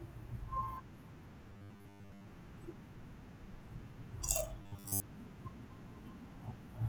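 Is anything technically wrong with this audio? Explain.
Yes, robotic sound from repeated short buffers, from 1.50 to 2.27 s and 4.62 to 5.03 s: audio likely arrived too late, so short chunks repeated, imposing a rigid, metallic 100 Hz buzz that only loosely tracks the speech.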